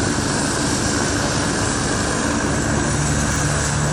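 At 3.32 to 3.4 s there is a brief jumbled blip: chunks out of order, with one 40 ms chunk playing a chunk late across hard joins.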